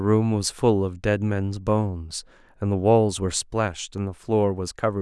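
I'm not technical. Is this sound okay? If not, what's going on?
Yes, this sound is okay, and there's nothing going on with it that needs fixing.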